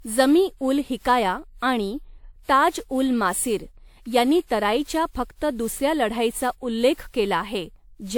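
Throughout, the speech was likely re-encoded with WMA at 128 kbit/s about seven times; this generation loss leaves swirly, hollow, smeared sound with blurred attacks.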